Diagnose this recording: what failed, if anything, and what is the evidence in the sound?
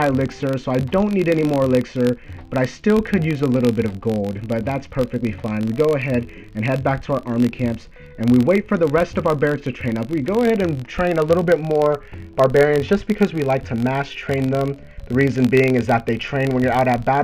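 A filter in the block-processing stage is restarted on every block: it drops its internal state at each block boundary and begins again from silence, so each block opens with a small transient. Throughout the recording this is audible as a buzz at about 46.9 Hz that rises and falls with the level of the sound. That repetition rate fits a 1024-sample block, which points to the buffer or driver-side processing.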